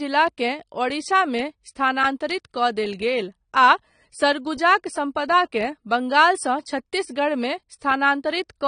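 Speech, and the whole way through it has that dull, smeared quality you get from heavy AAC compression. Nothing comes through above about 9.7 kHz, and the codec damage is plainly audible. It sounds like AAC-LC, likely at a low rate, something like 32 kbps.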